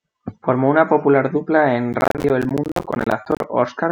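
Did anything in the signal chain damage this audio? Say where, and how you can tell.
Yes, at the driver/buffer stage: processor overload crackle from 1.93 to 3.44 s. Dozens of short silent gaps of about 10 ms from missed buffer deadlines tear the speech, a dense burst rather than isolated dropouts.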